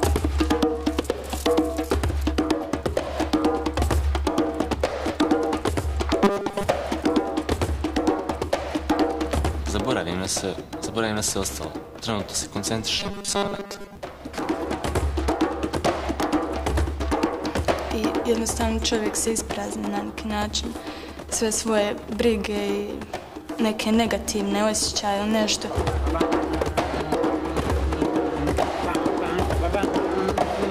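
From 6.24 to 6.63 s and again from 13.00 to 13.97 s, a robotic sound from repeated short buffers appears: a rigid, metallic 200 Hz buzz. It is likely caused by a 5 ms stretch being looped over most of the real audio. Unlike dropouts, no gap is heard.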